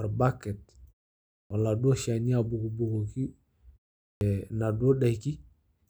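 Speech with a clipped start after a pause occurring twice. At 1.39 s, after a 0.54 s pause, about 114 ms of the next sound is swallowed, and at 4.09 s, after a 0.39 s pause, about 121 ms goes missing. Both times the output device sleeps through the silence and is still waking when sound resumes, so the speech jumps in abruptly without its opening. It is the lost onsets that mark this fault.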